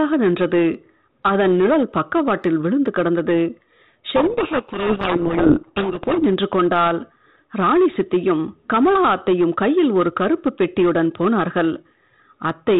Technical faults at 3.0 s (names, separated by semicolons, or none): hard clipping